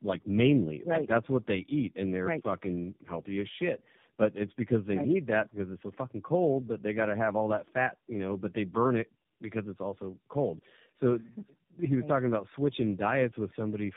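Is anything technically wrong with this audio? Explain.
Yes. Tandem speech coding affects the speech for the whole clip. The sound has passed through roughly three low-rate speech codecs in sequence, which fits a path such as iLBC, then G.729A, then AMR-NB, with decoding back to plain telephone-band audio between each. Every coder models the previous one's errors as if they were speech, so the losses stack. The result is rough, muffled and warbly, with nothing above 3.7 kHz.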